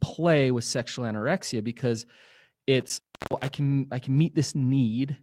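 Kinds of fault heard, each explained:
Lost packet rebuilt from error correction: around 0.81 to 0.87 s, 40 ms sounds rougher and noisier, consistent with two lost packets, but unlike a dropout there is no gap.
Intermittent contact: from 2.80 to 3.51 s the sound cuts out for about 340 ms with crackle at each edge and faint hiss underneath, unlike a clean digital dropout.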